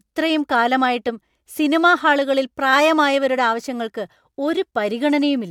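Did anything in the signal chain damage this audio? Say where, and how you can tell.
No, nothing audible in this speech points to damage at any stage of the chain.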